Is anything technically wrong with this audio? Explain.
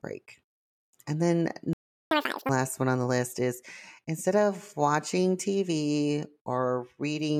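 Yes. There are two related playback faults in this speech clip.

At 1.73 s the audio cuts out abruptly and stays silent until 2.11 s, a gap of about 380 ms. This is a playback stall: the output simply stops mid-flow because nothing is reaching the output device. The likely cause is that the player's buffer ran dry or its audio thread was blocked for that interval. When sound returns, it continues from where it broke off rather than skipping ahead.

From 2.11 s to 2.49 s the speech runs at double speed, with pitch raised by close to ten semitones, giving a brief chipmunk-like squeak before it drops back to normal. This is catch-up at higher speed. The player resamples the backlog accumulated during the stall and plays it at 2x to recover the lost time. Because it resamples rather than time-stretches, speed and pitch rise together.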